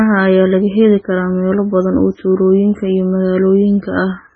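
Across the whole clip the speech has a watery, swirling quality, with thin metallic chirps on s sounds, smeared consonant onsets, and no treble at all above about 7.7 kHz. This is likely MP3 compression at a very low bitrate, around 16 kbps. Starved of bits, the encoder chops off the top band and discards quieter frequency lines. Those lines drop in and out between frames, which produces the heavy swirling damage.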